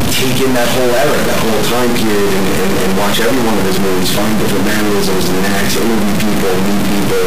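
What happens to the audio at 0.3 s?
At 0.3 s, as everywhere in the clip, the audio carries harsh, buzzy distortion, likely a stuck bit: one data bit is held fixed, throwing about half the samples off by a step near -10 dBFS. Unlike clipping, quiet passages fill with loud noise too.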